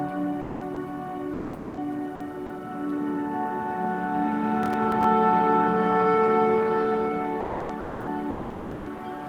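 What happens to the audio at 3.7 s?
Nothing goes wrong at 3.7 s: the audio carries straight through that moment with no dropout, click, glitch or other technical fault.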